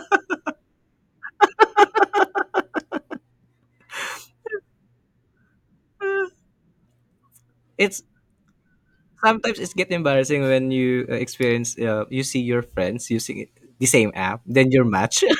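From 1.59 s to 3.15 s the speech carries a doubled audio track: a second full-band copy trails the original by roughly 400 ms, around 10 dB quieter, dry and without room colour. It switches on and off abruptly, likely from a slower capture path mixed back in.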